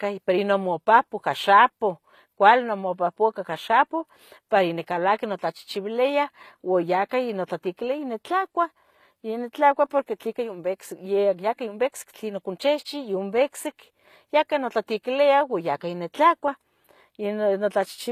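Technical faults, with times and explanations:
Throughout: likely HE-AAC compression. The speech has bright but gritty, metallic treble, and s sounds turn lispy. Nothing sounds above 14.9 kHz. The treble is rebuilt from copied lower bands, so harmonics misalign. The damage fits roughly 24 kbps.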